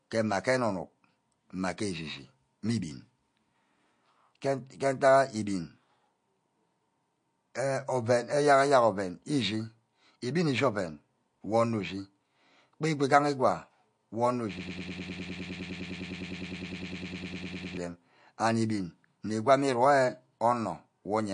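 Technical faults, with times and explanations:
Throughout, MP3 compression. The speech sounds watery and swirly, and the damage is plainly audible. Nothing is heard above 9.8 kHz, so the treble is cut off flat. Consonants like s sounds turn into metallic chirps. Attacks at the start of sounds are smeared. This is likely a starved MP3 encoder, which fits a low bitrate near 48 kbps. With too few bits, it drops the top band. It also zeroes weak frequency lines, which flicker on and off between frames.
14.58 to 17.77 s, broken-record loop. A fragment about 0.10 s long repeats back to back, 31 times. It is an exact copy each time, so it sounds like a stuck buzz or stutter. The speech that belonged in those three seconds is gone. The likely cause is a stalled player, encoder or stream. It kept resending the last fragment it held until fresh audio arrived.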